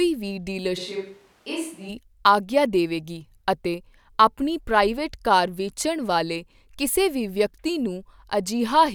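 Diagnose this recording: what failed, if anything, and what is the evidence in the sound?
Stage: analogue wiring at capture. From 0.79 to 1.88 s the speech turns hollow and roomy. Bass thins, level falls about 5 dB, and room noise rises. It snaps back before "ਆਗਿਆ ਦੇਵੇਗੀ ਅਤੇ ਆਪਣੀ". Likely a switch to a distant microphone when the close one dropped.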